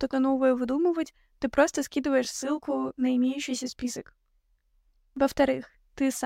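A speech recording with channel delay (comb filtering) from 2.25 s to 5.17 s. One channel trails the other by roughly 20 ms, and summing them to mono cancels shared content at evenly spaced frequencies, starting near 30 Hz. The voice turns rough and slightly doubled there. A spectrogram would show a stack of fixed, regularly spaced dark horizontal notches across that span, while the waveform looks smeared and slightly doubled.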